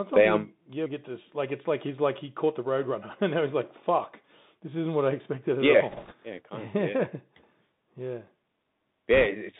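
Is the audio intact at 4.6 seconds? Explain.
No. At 4.6 seconds, as across the whole clip, the speech carries Bluetooth CVSD headset codec damage. The codec codes each sample as a single up-or-down bit, with a step size that adapts, in a narrow line band of about 150 Hz to 3.7 kHz. At this point the speech sounds boxed in and thin, s sounds turn scratchy, louder high-frequency energy distorts where it outruns the step, and a granular hiss sits underneath.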